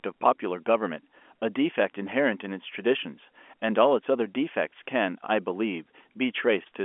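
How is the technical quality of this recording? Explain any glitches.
No glitches can be heard in the speech, which comes over G.711 telephone coding with the narrow line band of that format, running from about 250 Hz to 3.4 kHz with nothing above 3.7 kHz.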